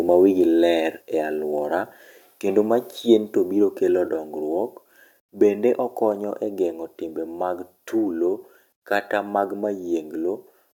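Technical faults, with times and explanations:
1.02 s, microphone volume stepped down: right after "mawigi ler" and before "e aluora kendo ma", the speech and the background noise floor both drop by about 3 dB in a single step and stay at the lower level. Because the voice and the room sound fall together, the change is in the capture level, not in the talker. The likely cause is call software judging the microphone too hot and cutting its input volume in one move.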